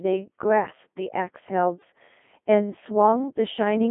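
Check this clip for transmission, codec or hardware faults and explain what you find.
Codec 2 vocoder coding runs through the whole clip. Instead of carrying the waveform, the coder sent only pitch, voicing, energy and a coarse spectral envelope, and the decoder rebuilt the speech from summed sine waves. The result is heavily damaged: robotic and buzzy, confined to a 200 Hz to 3.5 kHz band with nothing above 3.7 kHz. The degree of smearing fits a low-rate mode around 2.4 kbit/s.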